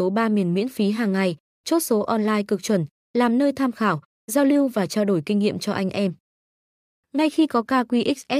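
Speech recording with no audible technical faults: no dropouts, clipping, glitches or level problems anywhere in it.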